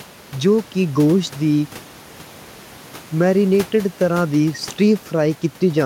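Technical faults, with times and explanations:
No technical faults are audible in this speech; the room noise sits about 22 dB below the speech as part of the recording, not a system fault.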